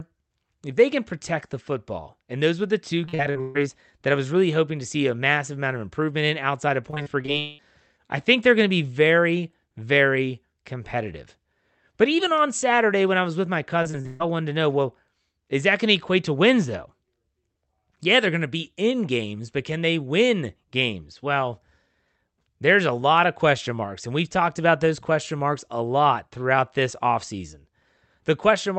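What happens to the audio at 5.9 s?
Nothing goes wrong at 5.9 s; the speech there comes through intact, carried by the call path as it behaves normally.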